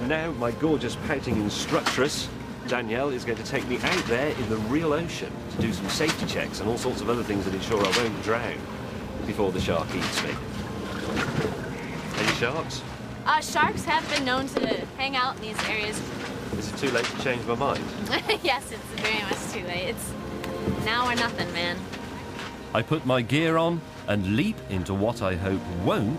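Nothing stands out here; the audio runs along without any technical problems worth pointing to.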